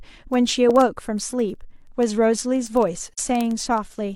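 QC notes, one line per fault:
0.12–4.15 s, word clock ticks: a steady train of sharp ticks of uneven strength, repeating roughly every 50 ms, about seventy in all, running almost the full length of the speech. The receiving device is clocking itself instead of locking to the sender's word clock. A mismatch on the order of 400 ppm makes the two clocks slide past each other at that rate, and at every slip one sample is dropped or repeated while its neighbours are misread, leaving a tick each time.
3.13–3.18 s, AAC frame loss with muting: a brief dip about 43 ms long, where the sound fades out and back in again. That length fits one missing AAC frame. With that frame gone, the decoder set its spectrum to zero. The overlapping transform windows on either side then taper the surrounding audio into and out of the gap, so the dropout is a smooth dip rather than a hard cut.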